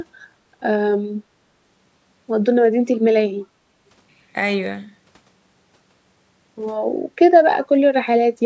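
Near the end, from 7.62 to 7.67 s, there is an echo leak. The far side's echo canceller likely failed to remove its loudspeaker's output from its microphone signal, so a copy of the speech came back about 364 ms late. It is faint, roughly 25 dB below the live speech, and heard only as a brief scrap of returned sound about 50 ms long, sitting inside the band-limited call audio that stops at 8 kHz.

Just after, from 7.73 to 7.78 s, comes speech suppressed in double talk. With both ends active at once, the echo canceller likely could not tell the local talker from the loudspeaker echo and pulled the whole signal down to be safe. The talker's level dips by roughly 5 dB over about 50 ms, a short, soft sag rather than a full dropout.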